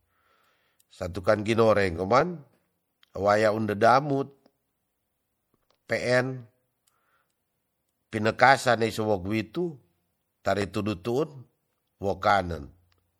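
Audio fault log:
throughout: MP3 compression. Plainly audible watery, swirling artefacts as weak frequency lines switch on and off between frames, with smeared attacks and nothing above 21.1 kHz, at a bitrate around 64 kbps. This is likely lossy encoding, not noise or filtering, because the damage shifts frame to frame.
0.52–13.14 s: clock drift buffer slips. About 15 clicks recur every 0.84 s. Each is a jump where roughly 30 samples are dropped or repeated. The likely cause is two clocks differing by about 0.1 percent. The strict regular spacing separates these from random dropouts.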